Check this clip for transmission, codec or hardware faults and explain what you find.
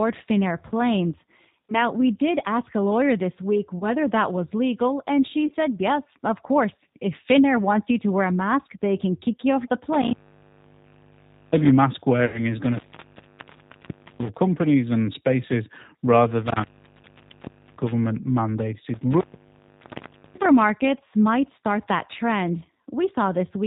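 There are three problems here: a low-bitrate speech codec over the whole clip, a few concealed packet losses, and a connection that keeps dropping out.

G.729 codec: The whole clip sounds like G.729 at 8 kbit/s. The voice is rebuilt from a filter model, a pitch predictor and a handful of pulses per frame, so everything above 4 kHz is gone. The damage is plainly audible as a rough, slightly synthetic edge on the speech.

VoIP packet loss concealed by the speech codec: Short glitches at 3.79 s, right after "lawyer this week", and at 5.47 s, after "was legal and she". Each covers about 20 ms, which fits a single lost packet. A longer one runs 12.26–12.44 s, roughly 80 ms lost. In each case the decoder guesses forward from its last pitch and filter and fades it down, so you get a brief smear, a buzzy tone or coloured noise, that stays a bit weak before recovering.

Intermittent contact: The sound cuts out three times, at 9.93–11.71 s, 12.60–14.37 s, and 16.46–17.92 s after "and spaces rather". 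The line is open for about 1.4 s, 1.4 s and 1.1 s. That's a loose cable or plug breaking contact. There's crackle at each edge and just faint hiss in between.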